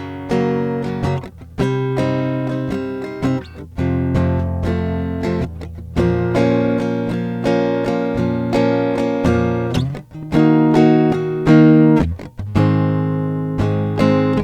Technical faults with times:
4.46-6.87 call bitrate drop

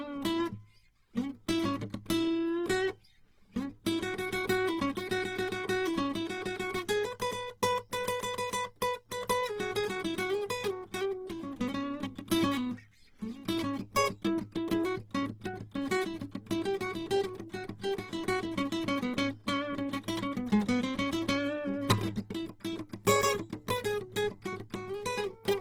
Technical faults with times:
0.00-25.61 Opus compression

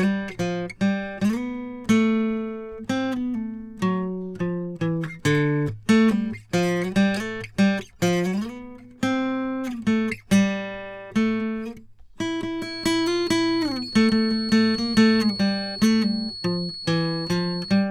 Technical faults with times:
12.56-17.91 feedback whistle

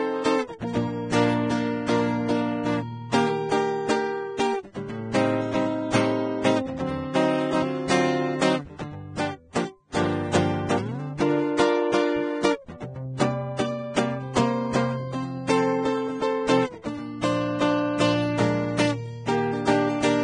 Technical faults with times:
0.00-20.23 Vorbis compression

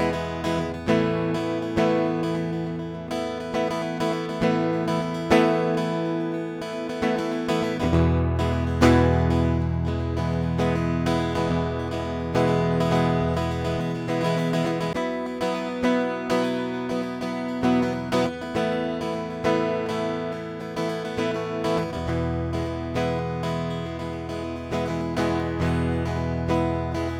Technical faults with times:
12.35-14.93 doubled audio track

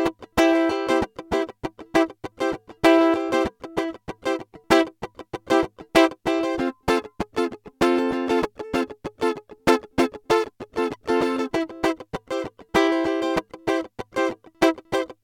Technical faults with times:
none

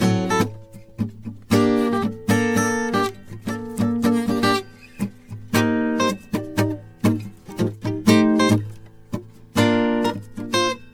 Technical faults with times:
0.00-10.94 generation loss

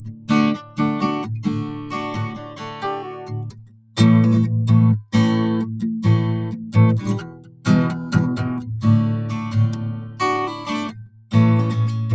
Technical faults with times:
0.00-12.14 noise suppressor applied to music or sounds
0.00-0.30 sound cut by the noise suppressor
0.62-0.79 sound cut by the noise suppressor
1.65-1.93 sound cut by the noise suppressor
2.28-2.83 sound cut by the noise suppressor
3.43-3.96 sound cut by the noise suppressor
7.21-7.66 sound cut by the noise suppressor
9.95-10.20 sound cut by the noise suppressor
10.91-11.33 sound cut by the noise suppressor

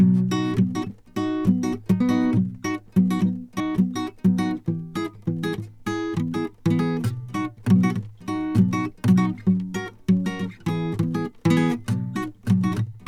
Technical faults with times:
3.60 compressed frames skipped

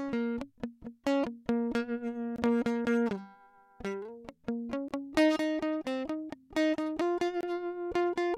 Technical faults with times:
2.36-2.38 gap between chunks
4.88-4.91 gap between chunks
7.41-7.43 gap between chunks

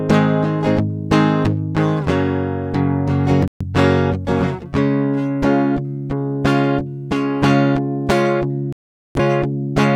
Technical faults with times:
3.48-3.65 digital broadcast dropout
8.73-9.20 digital broadcast dropout

